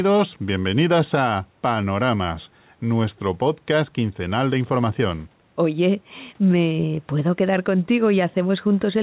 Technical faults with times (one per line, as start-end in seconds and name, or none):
0.00-9.02 gain pumping